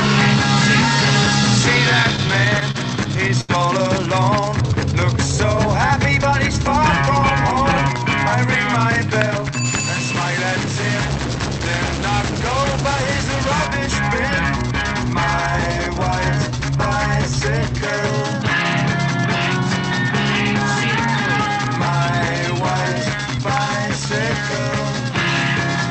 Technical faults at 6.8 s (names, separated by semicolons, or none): none